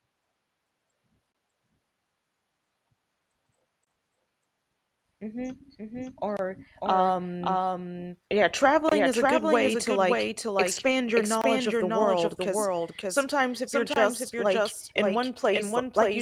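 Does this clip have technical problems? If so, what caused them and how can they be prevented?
Yes, there are three kinds of fault.

Doubled audio track: a second copy of the signal, probably captured again through a slower route such as a monitoring or loopback path, is mixed in with the original. Throughout the whole clip, an identical full-band copy trails roughly half a second behind and about 5 dB quieter. It carries no reverberant tail or room colour, so every phrase is shadowed by a clean, slightly softer repeat. To prevent it, make sure the call audio is captured from one path only and disable any loopback or monitor feed that is being recorded alongside it.

Gap between chunks: the audio was delivered in 2.5-second chunks, and each join leaves a short stretch of silence. Hard-edged holes of about 23 ms open at 1.32, 3.85, 6.37, 8.89, 11.41 and 13.94 s. No sound is lost, but the flow is cut at each boundary. 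To prevent it, trim encoder padding at chunk boundaries or use gapless playback that schedules each chunk back-to-back.

Lost packet rebuilt from error correction: several separate packets went missing in transit, and the decoder filled them from the low-bitrate backup copies carried in the following packets. From 10.71 to 10.93 s there is no dropout. Instead, about 120 ms of audio turns rougher and grainier before clean decoding resumes. On either side, the Opus call path keeps its usual coding noise and a top end limited to about 12 kHz. To prevent it, improve network stability or enlarge the jitter buffer so fewer packets arrive too late to use.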